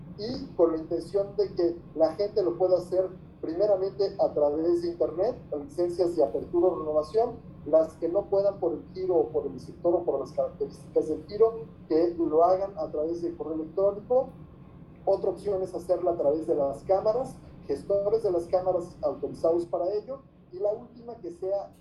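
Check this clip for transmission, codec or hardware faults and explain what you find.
One fault is present. At 19.64 s a sudden gain jump drops the level by about 6 dB until the end. Sound and noise fall together, likely from an unramped gain change.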